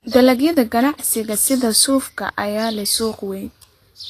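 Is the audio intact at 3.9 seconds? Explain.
No. Vorbis compression affects the whole clip, including 3.9 s, and is likely the cause. Nothing sounds above 14.2 kHz. Coarsely quantised treble turns fine detail into plainly audible hiss and grain, which fits a low bitrate around 36 kbps.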